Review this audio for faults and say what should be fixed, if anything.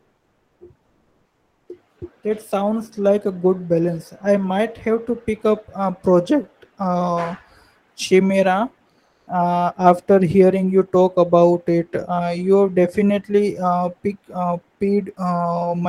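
There's comfort noise in place of the background in three pauses: 0.00 to 0.59 s, 0.85 to 1.67 s, and 9.05 to 9.27 s. In each gap the real room tone, sitting about 50 dB under the loud parts, gets swapped for a flat, featureless hiss at a slightly different level (about 1 dB down, 1 dB up, then 2 dB down). That points to Opus discontinuous transmission as the likely cause: the encoder goes quiet when it hears no speech and the decoder fills in synthetic noise. To avoid it, turn DTX off in the Opus encoder settings for this capture path.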